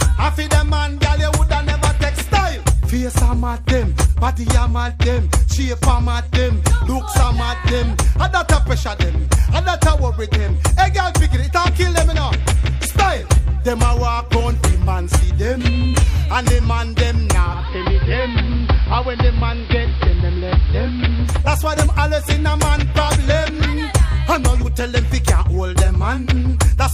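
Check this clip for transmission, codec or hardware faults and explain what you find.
One fault is present: digital radio blending to analogue, from 17.43 s to 21.50 s. The receiver lost its digital stream and cross-faded over about 0.29 s to the AM broadcast of the same station, then back. AM carries a narrow audio band, so the treble drops and the sound turns dull. Hiss rises to roughly 25 dB below the programme. The level stays the same across both blends.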